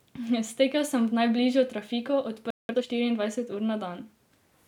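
At 2.50 s the speech cuts to silence for about 0.19 s, a playback stall, likely the player running short of data or its thread being blocked. From 2.69 to 2.87 s comes time-compressed catch-up: the backlog plays at twice normal speed, hurried but at unchanged pitch.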